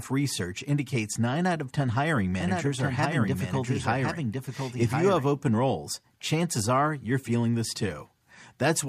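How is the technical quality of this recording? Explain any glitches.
There's one glitch. From 2.40 to 5.28 s, a doubled audio track: a dry, quieter copy of the speech lags about a second behind, likely from a slower capture path, cutting in and out abruptly.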